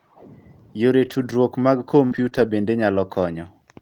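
From 1.01 to 1.31 s, the speech turns rough and noisy but never drops out. This is a lost packet rebuilt from error correction. Several packets went missing, and the decoder played the low-bitrate copies carried in the packets that followed, so the gap is covered by a coarser version.

At 2.05 s there is a burst of packet loss. The last sound is held and fades for about 55 ms. The speech then resumes with roughly 60 ms skipped. The same rough, rebuilt texture follows from 2.13 to 2.27 s.

From 2.29 to 2.33 s, a short concealed packet loss leaves a brief smear. About 20 ms arrived too late, and the receiver extended the previous sound to fill the hole. From 2.33 to 2.43 s there is more rebuilt, noisier audio from error correction.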